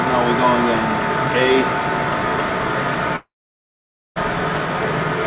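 The audio likely lost its network stream in a long network dropout from 3.16 to 4.18 s: the last sound is stretched into a brief fading buzz or hiss, then about 0.9 s of near-silence, and the audio resumes with that stretch missing, still band-limited to 4 kHz by the G.711 mu-law call path.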